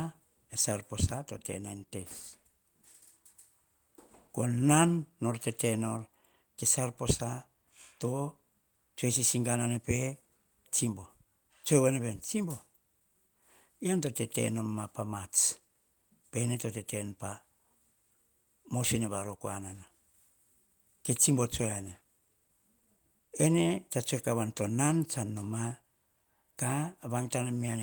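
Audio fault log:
throughout: clock drift between sender and receiver. The sending clock runs around five percent fast, so audio arrives quicker than the receiver plays it out and the jitter buffer keeps filling. The receiver has to discard material to keep latency in check, and this recurs unevenly across the speech.
0.06–27.64 s: repeated timing corrections. The receiver keeps trimming short pieces from the speech to match a sender running at 105% speed. Every edit removes audio and none repeats it. The cuts are small and irregularly spaced.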